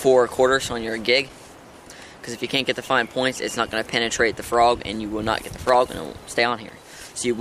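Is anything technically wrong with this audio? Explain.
Yes. Loose connector crackle appears twice, from 1.19 to 1.47 s and again from 5.51 to 5.74 s, each burst lasting roughly a quarter of a second. A worn or dirty contact in the signal path is briefly disturbed, so the connection flickers open and closed many times in quick succession, chopping the audio. The result is an irregular, scratchy crackle laid over the sound, starting and stopping abruptly.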